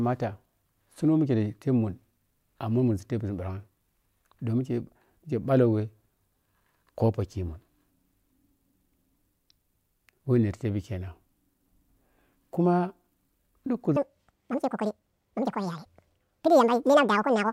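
From 13.96 s to the end at 17.53 s, the speech turns hurried and shrill, running at double speed and around ten semitones higher: a section at the wrong speed, likely played back against the wrong clock.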